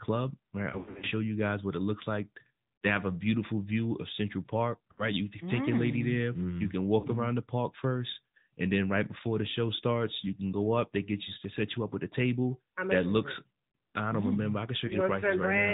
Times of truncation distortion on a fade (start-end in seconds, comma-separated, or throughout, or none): none